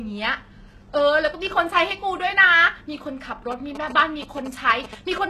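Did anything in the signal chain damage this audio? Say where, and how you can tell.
Yes. Throughout, the treble sounds metallic and lispy and stops at 12.3 kHz. That is likely HE-AAC compression near 16 kbps, which rebuilds the highs by band replication instead of just dulling them.

From 3.52 to 5.18 s, GSM signalling bursts enter the analogue wiring. They sound like galloping 217 Hz buzzes well below the speech, rectified radio pulses rather than steady mains hum.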